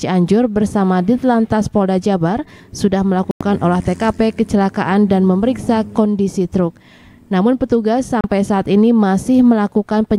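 Two digital broadcast dropouts mute the sound: a hole of about 96 ms at 3.31 s, and a shorter 32 ms gap at 8.21 s. The receiver lost valid frames and held silence until clean data resumed. Audio sent during each gap is gone. The lengths fit roughly three lost frames and one.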